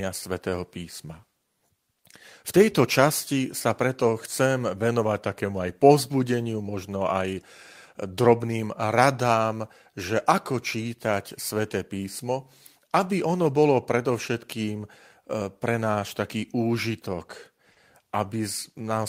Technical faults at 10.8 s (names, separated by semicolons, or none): clock drift between sender and receiver; repeated timing corrections